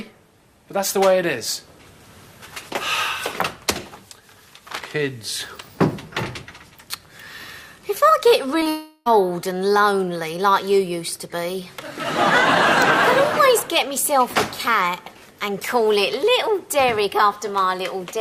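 At 8.59 and 8.63 s there are two short concealed packet losses, each filling about 20 ms by stretching the last sound, leaving a quick smear or wobble. Right after, from 8.69 to 9.08 s, the sound turns into a fading buzz that drops to brief silence before resuming, likely a long network dropout where about 0.36 s never arrived.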